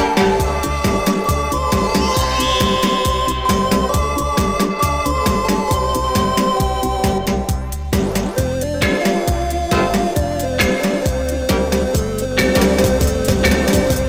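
From 12.41 s to the end there is a doubled audio track: an equal-level, full-band copy trails about one second behind, likely picked up by a second, slower capture path.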